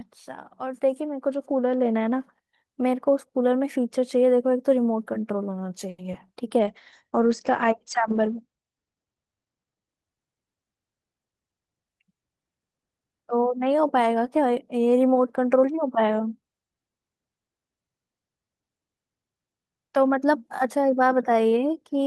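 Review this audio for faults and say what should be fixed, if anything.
A short stall from a late packet occurs at 5.89 to 6.00 s. A packet arrived late and the jitter buffer ran dry. The receiver held the last sound for 90 ms until the packet came in, then carried on from the same point. Nothing is lost, but the speech drags for a moment with a faint buzz or dip, and playback now runs 90 ms later. A deeper jitter buffer with adaptive sizing would prevent this.

Short concealed packet loss follows at 6.12 to 6.15 s. About 40 ms of speech never reached the decoder in time. Only about 10 ms was filled by extending the preceding sound, and the rest was skipped, pulling the delay back by about 30 ms. It is heard as a quick smear or wobble where a small piece of speech drops out. Forward error correction or redundant packets would let the receiver rebuild the lost audio.

A call bitrate drop runs from 6.61 to 9.97 s. 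The bandwidth estimate fell, and the encoder went from 32 kbps down to 12 kbps, staying at the lowest rate for 3.27 s. At that rate the coded band shrank from 20 kHz to 8 kHz. The speech turns muffled, losing its crisp sibilants, until the bitrate comes back. Steadier congestion control and a sensible minimum bitrate floor would avoid this.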